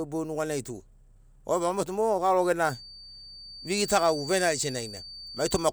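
From 2.58 s to the end, a feedback whistle at 4.6 kHz sits roughly 15 dB below the speech, likely from a loudspeaker-to-microphone loop held just short of runaway.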